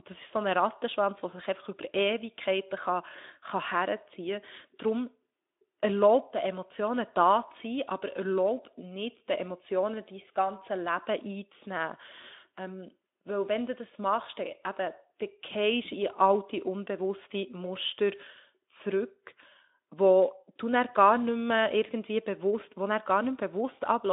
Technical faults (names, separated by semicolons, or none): none